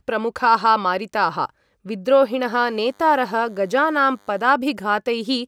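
From 2.52 s to 4.52 s, a DECT cordless phone buzz appears. A DECT handset or base station near the recording chain transmits a short radio burst every 10 ms, and the audio circuitry rectifies those bursts into the signal path. The result is a thin, steady buzz at 100 Hz, rich in harmonics. It sits faint and well beneath the speech for those two seconds and then stops.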